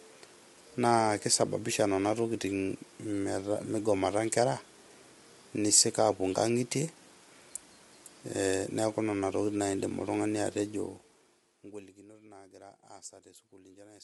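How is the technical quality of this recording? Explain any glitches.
The recording carries audible codec damage from start to finish, consistent with low-delay AAC compression, likely AAC-ELD. Its short transform frames resolve the voice's harmonics poorly, so at a rate that fits around 32 kbps the speech sounds rough and grainy, with noise filling the gaps between harmonics. Nothing is present above about 11.6 kHz, and the top band sounds thin.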